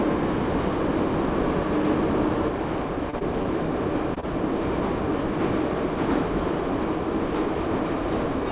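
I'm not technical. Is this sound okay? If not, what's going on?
No. Two separate problems can be heard in this recording of everyday sounds.

From the very start until 2.48 s there is a doubled audio track: the same sound plays twice, with the second copy about a tenth of a second behind and roughly as loud as the first. This gives a flammy, stuttering echo with no room sound to it. The most likely cause is the sound being picked up a second time through a slower route. At 2.48 s the copy stops abruptly.

Later come five instances of short concealed packet loss, starting at 3.10, 3.19, 3.43, 4.15 and 4.20 s. Each time, about 20 milliseconds of sound never arrived. The receiving end patched the gap by stretching the previous sound and then blending back. What you hear is a brief smear or wobble, and a very short sound may drop out entirely.

The call connection itself is working normally, though it carries nothing above about 4 kHz, so everything sounds somewhat muffled.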